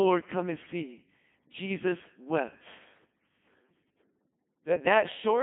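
From start to finish the speech passes through a Codec 2 vocoder, heavily damaged. Only pitch, voicing, energy and a coarse spectral envelope survive, resynthesised from sine waves, so it sounds robotic and buzzy, confined to roughly 150 Hz to 3.5 kHz, which fits a 2.4 kbit/s mode.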